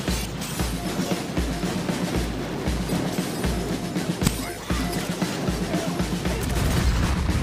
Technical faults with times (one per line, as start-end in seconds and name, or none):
4.24-4.28 damaged data in a compressed stream